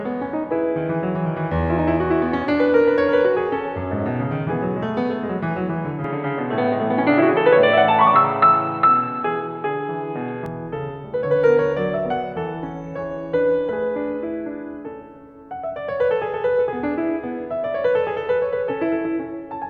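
From 6.04 to 10.46 s the input likely switched to a poorer device. With no gap at the change, the music abruptly loses everything above 4.3 kHz, turning dull and boxy, shifts level by a few decibels and gains faint new background noise, then clears again.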